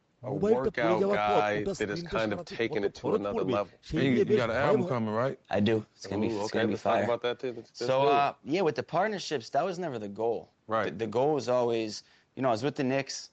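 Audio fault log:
The speech arrives through an ordinary call chain, with the microphone processing and the Opus codec in the WebRTC path leaving nothing above 8 kHz, and the signal shows no faults.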